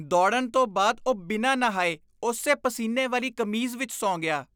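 Throughout the speech, sample clock jitter adds a rough hiss. The converter's timing wanders by a microsecond or two, so steep, bright passages pick up error roughly 40 dB below the signal. On a spectrogram, faint broadband haze tracks loud, sibilant moments and disappears in pauses.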